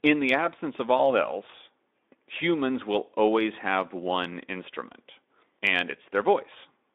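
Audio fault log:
0.97–1.12 s, VoIP packet loss concealed by the speech codec: after "in the absence of", a loss fitting one 20 ms frame is bridged by extrapolated pitch, heard as a fading buzzy tone or coloured noise rather than a silent dropout, weak until "else humans will always" as the decoder recovers.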